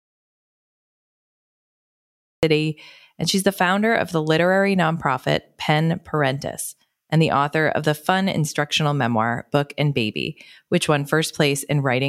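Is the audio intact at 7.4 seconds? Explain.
Yes, the audio is intact at 7.4 seconds, with no audible fault at that moment.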